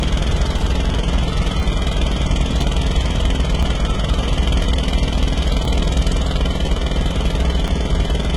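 Throughout the clip the sounds carry heavy codec damage, likely HE-AAC compression at a very low bitrate, around 16 kbps. Nothing is present above about 11.7 kHz, and the treble is rebuilt from copied lower bands, so high detail sounds gritty and metallic rather than natural.

Overlapping chunks then appear at 0.59, 1.60, 2.61, 3.63, 4.64, 5.65, 6.67 and 7.68 s. The audio was handled in 1-second chunks, each starting about 13 ms before the previous one ended, so that sliver plays twice and produces a regular click or stutter.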